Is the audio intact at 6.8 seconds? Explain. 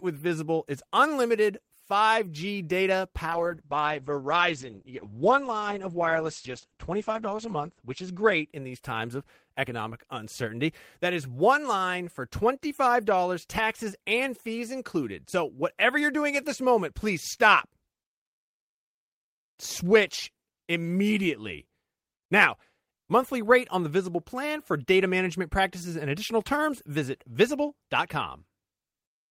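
No. A call bitrate drop runs from 3.27 to 9.73 s. The bandwidth estimate fell and the encoder coded far more coarsely, which fits a fall from about 32 to 10 kbps. Treble above 8 kHz disappears, leaving the speech muffled and rough.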